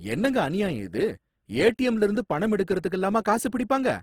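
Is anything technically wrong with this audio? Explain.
Yes. Throughout the speech there is plainly audible Opus compression. The likely cause is Opus encoding in its CELT mode at a very low rate, which fits about 16 kbps. Bandwidth stays full, reaching about 20.2 kHz, but the encoder keeps each band's energy while filling starved bands with folded or noise content, so tonal parts of the voice turn grainy, rough and hissy. A spectrogram shows smeared, noise-textured bands instead of clean harmonic lines.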